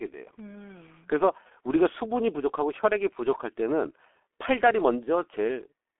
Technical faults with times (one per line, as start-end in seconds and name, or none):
0.00-6.00 G.723.1 codec